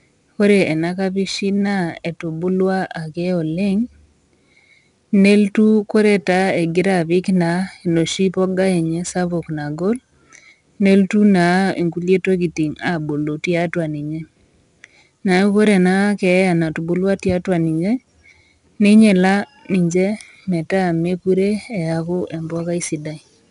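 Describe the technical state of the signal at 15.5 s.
At 15.5 s the speech carries 4-bit ADPCM compression, present throughout the clip. Each sample is coded as a coarse step from a prediction, so a gritty hiss rides on louder sounds. Nothing is heard above 10.6 kHz, which fits a reduced sample rate, with the stream at 89 kbps.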